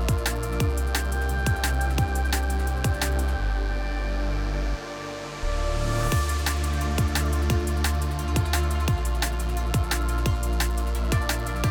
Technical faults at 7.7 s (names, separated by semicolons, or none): mains buzz